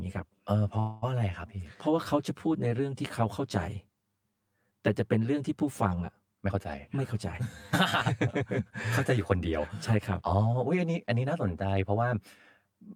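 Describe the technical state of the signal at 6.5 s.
At 6.5 s a jitter buffer speed-up is underway, running from 6.39 to 7.02 s. The receiver trimmed about a tenth of a second of pitch-period slices to drain excess buffered audio, so speech plays at 117% speed at unchanged pitch and sounds hurried. Underneath, channel delay (comb filtering) persists: one channel lags the other by roughly 10 ms before mono summing, carving evenly spaced notches from around 50 Hz upward, leaving the speech hollow and phasey.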